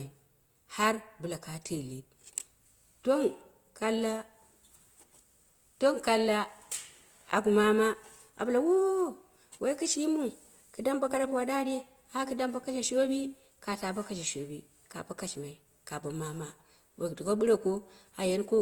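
From start to finish the speech carries plainly audible damage from a lossy codec, likely Opus compression running its music (CELT) mode at a rate that fits roughly 24 kbps. With too few bits, the encoder keeps each band's energy but fills detail with folded or noise-like content, so tones sound rough and grainy rather than swirling. On a spectrogram the bands stay filled up to about 20.1 kHz, yet harmonics look smeared and speckled instead of clean.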